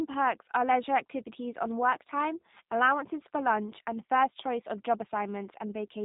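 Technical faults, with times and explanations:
Throughout, G.729 codec: the speech is rebuilt from a vocal tract filter, a pitch predictor and a few pulses per subframe, so it is clear but plainly rough and synthetic, with a buzzy edge, which fits an 8 kbit/s VoIP stream. On a spectrogram, all energy stops sharply at 3.8 kHz, leaving a blank band above. Harmonics look smeared and grainy. The waveform shows rebuilt rather than original shapes.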